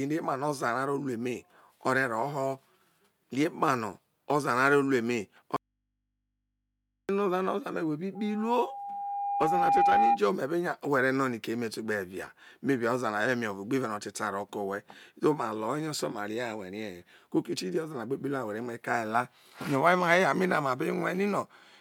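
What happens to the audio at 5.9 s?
The speech cuts out abruptly at 5.56 s, leaving only a faint mains hum roughly 55 dB below the signal, until it returns at 7.09 s. This audio dropout to a faint residue is likely a broken feed into a still-live input that picked up hum.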